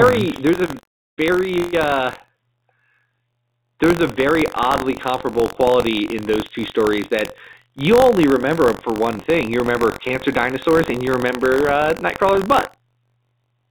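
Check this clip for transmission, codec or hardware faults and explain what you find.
One fault runs through the whole clip: buffer tearing. Wherever speech is present, a steady robotic rattle of about 47 Hz sits under it, and it disappears in the pauses. The writer and reader of a ring buffer have slipped past each other, so each period carries a thin sliver, a few percent, of audio from roughly 70 ms earlier, spliced in with hard joins on both sides. Those joins repeat once per buffer, a rate that fits a 1024-sample buffer. The narrowband call path is also audible, with nothing above 4 kHz, which is the telephone channel's normal limit.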